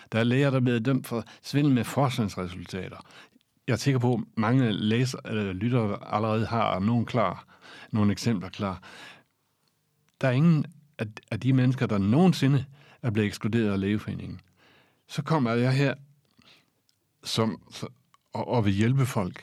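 After "er læger der er", from 0.66 to 2.05 s, speech runs 5.7% fast and about a semitone sharp. From 17.29 to 19.07 s it runs 5.7% slow, a semitone flat. Each is likely a drift correction step.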